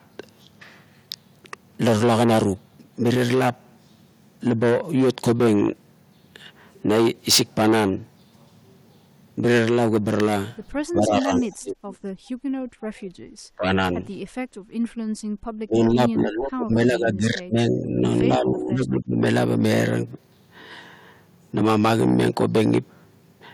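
From 10.89 to 11.77 s the voice sinks sharply, by roughly 25 dB at its lowest, and thins out in broken pieces for about a second. This is speech suppressed in double talk: with both ends talking at once, the echo canceller likely could not tell the local talker from the loudspeaker echo and pulled everything down.

Inside that stretch, from 11.39 to 11.55 s, a faint delayed copy of the voice slips through about 246 ms behind the original and some 30 dB below it. This is an echo leak. A loudspeaker at the far end likely fed its microphone, and that end's canceller failed to remove all of it, so a scrap came back.

From 12.15 to 12.67 s the room sound drops away by about 17 dB and then returns. This is background gated by the echo canceller, which clamped the microphone hard while the loudspeaker played.

The voice dips again from 12.95 to 13.15 s, by about 30 dB, and from 13.56 to 13.82 s, by roughly 25 dB, so it cuts out in short bites.

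From 14.48 to 15.35 s the room sound is gated again, falling by about 18 dB before the canceller lets go.

The longest suppression runs from 15.63 to 18.04 s. The voice stays muffled and uneven there, down by up to about 20 dB, with the losses adding up to around two seconds. From 18.25 to 19.24 s a milder dip of about 15 dB follows, as the overlapping talk keeps the suppressor engaged.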